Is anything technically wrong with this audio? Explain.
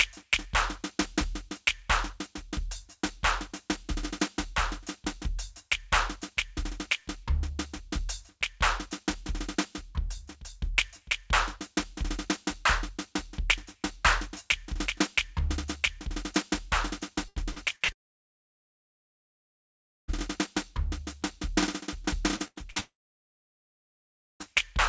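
Yes. The music breaks up several times near the end, heard against a band limit with nothing above 8 kHz, which fits a G.722 call path.

Repeated packet loss (robotic sound), 17.28 to 17.91 s: four gaps, the longest 80 ms, are patched by repeating the last sound, so about a third of the stretch sounds choppy and robotic.

Long network dropout, 17.92 to 20.11 s and 22.80 to 24.43 s: the audio decays into silence, with about 2.2 s and 1.6 s lost, then resumes with that material gone. The likely cause is a network outage.

Short concealed packet loss, 22.36 to 22.43 s and 22.72 to 22.79 s: 40 ms holes are filled by extending the preceding sound, giving a brief smear.

Burst of packet loss, 22.48 to 22.59 s: about 80 ms is missing. It is bridged by a fading continuation of the last sound, then playback jumps ahead.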